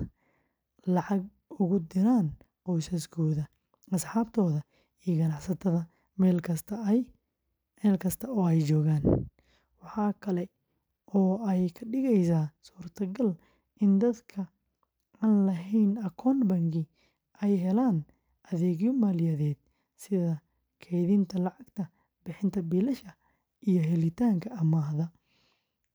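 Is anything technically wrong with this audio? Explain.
No, no technical faults heard.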